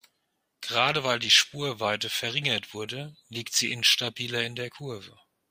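No technical faults can be heard anywhere in the recording; the speech signal stays continuous and stable throughout.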